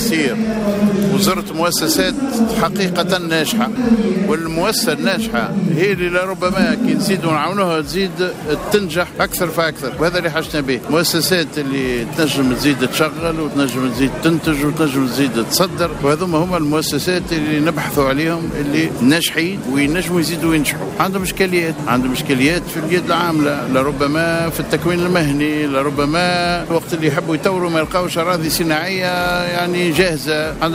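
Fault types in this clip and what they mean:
No faults present; nothing in the signal path calls for attention.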